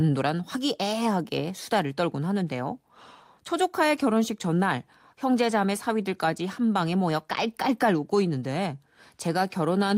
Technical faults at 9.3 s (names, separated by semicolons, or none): none